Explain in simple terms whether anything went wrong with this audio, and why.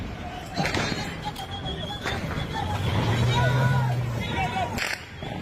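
Yes, something did go wrong: from about 1.21 to 3.13 seconds there's a call bitrate drop. The connection briefly got squeezed, so the encoder had far fewer bits to work with, and the sound turns rougher, duller and a bit watery before clearing up again.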